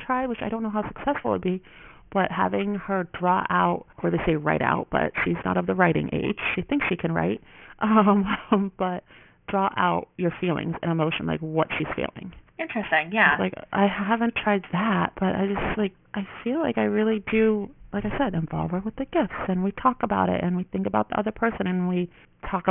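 Aliasing runs throughout: the speech was downsampled, which fits a drop to around 6 kHz, without an anti-aliasing filter, so content above 3 kHz folds back as false, unrelated tones sitting not far below the speech. Sibilants sound gritty and metallic, with energy packed hard against the band edge.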